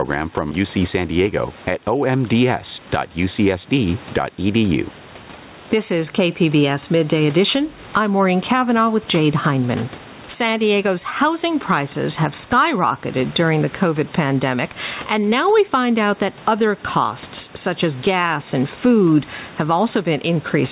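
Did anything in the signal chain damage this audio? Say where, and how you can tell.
Yes. Through the whole clip the level breathes, with a swing of around 15 dB, and loud and quiet syllables sit squashed close together. That is gain pumping, likely from the input gain being set far too high at the microphone preamp, with a fast limiter or compressor in the call processing clamping down on each loud sound. The background is the room noise, normally about 31 dB below the speech, and the top end stops at 4 kHz, as expected for a G.711 narrowband call.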